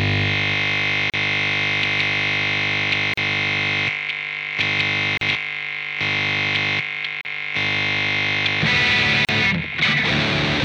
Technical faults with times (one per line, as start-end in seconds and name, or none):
1.10-1.14 gap at a join of encoded pieces
3.14-3.17 gap at a join of encoded pieces
5.17-5.21 gap at a join of encoded pieces
7.21-7.25 gap at a join of encoded pieces
9.25-9.29 gap at a join of encoded pieces